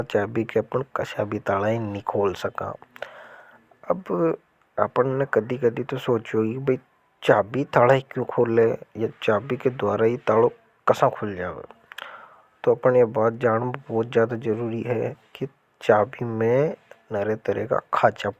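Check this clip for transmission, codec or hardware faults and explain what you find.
No faults can be heard.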